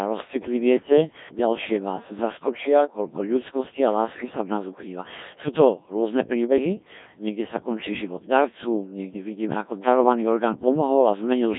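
Robotic, buzzy speech throughout, band-limited to about 150 Hz–3.7 kHz: a Codec 2 vocoder resynthesising voice from pitch and envelope, heavy damage fitting roughly 1.3 kbit/s.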